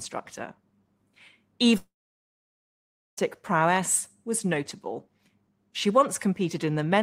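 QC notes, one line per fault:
1.77–3.19 s, long network dropout: the speech smears into a short buzzing tail that fades, then about 1.3 s of silence before it resumes with 1.4 s of material gone. Likely the stream stopped arriving, so the receiver stretched the last sound briefly, then fell silent.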